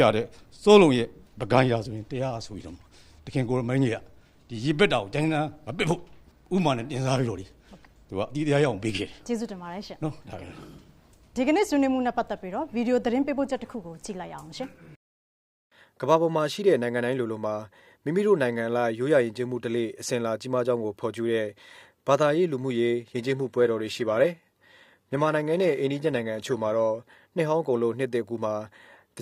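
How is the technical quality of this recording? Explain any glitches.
One glitch: from 23.02 to 27.02 s the adaptive stream drops to a lower bitrate, consistent with a switch from 96 kbit/s AAC-LC to 24 kbit/s HE-AAC. Nothing sounds above 14.9 kHz, and artefacts rise abruptly without a gap.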